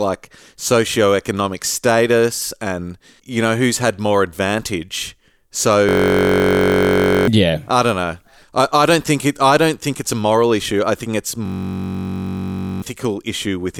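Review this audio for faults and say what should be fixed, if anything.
A system hang loop occurs at 5.89–7.28 s, just before "yeah I don't know", and again at 11.46–12.82 s, after "issue I think it's". Each time, a 21.33 ms slice repeats exactly, which fits a 1024-sample ring buffer that kept cycling while the system froze. The result is a steady 46.9 Hz buzz and about one and a half seconds of missing speech. Unlike a dropout, it is a pitched buzz rather than silence. Unlike a codec stutter, the repeats are identical and evenly spaced. To prevent it, fix the driver or system stall, for example by running the audio thread at real-time priority so the buffer is always refilled.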